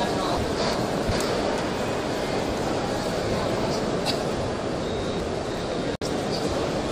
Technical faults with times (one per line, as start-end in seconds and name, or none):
0.37-1.11 chunks out of order
4.83-5.57 chunks out of order
5.95-6.02 gap at a join of encoded pieces